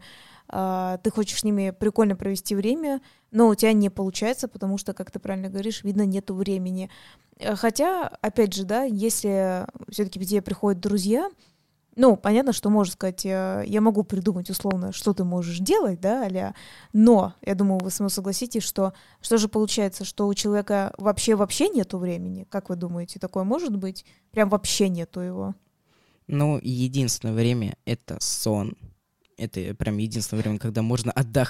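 At 14.71 to 14.73 s there's a loud pop, a single sharp click sitting well above the speech, around 15 dB hotter than the signal, while the talking carries straight on underneath. A second, somewhat softer one follows at 17.80 to 17.82 s, roughly 10 dB over the level. Both are likely a sudden voltage step or spike, from a plug, switch, static discharge or driver glitch, pushed through the chain and shaped into a brief thump.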